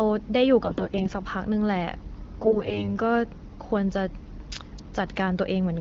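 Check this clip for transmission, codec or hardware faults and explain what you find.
Two short bursts of AMR bit errors damage the speech, from 0.61 to 1.14 s and from 2.41 to 2.85 s. In both, the voice keeps roughly its pitch and loudness but turns hoarse, scratchy and gargly. The link was weak. Around one bit in ten of the less protected frame data arrived flipped, while the check on the key bits still passed. So the decoder trusted bad data. Excitation pulses landed wrongly, and fine pitch, gain and spectral values went astray. Outside these bursts, the wideband AMR-WB coding sounds clear, which fits a rate around 12.65 kbit/s.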